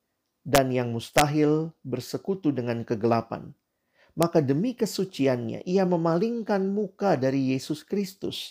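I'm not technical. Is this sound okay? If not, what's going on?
No. Sharp, violent cracks cut through the speech at 0.55 to 0.58 s, 1.18 to 1.21 s and 4.23 s. This is integer overflow: the loudest moments went past the highest number the audio could hold, and instead of being capped they flipped to the opposite extreme.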